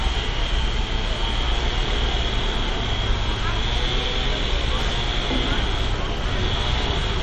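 The audio sounds watery and swirly throughout, with nothing above about 11.7 kHz and attacks that smear. The likely cause is MP3 compression at a low bitrate, around 48 kbps, where the encoder cuts the treble and switches weak frequency content on and off between frames.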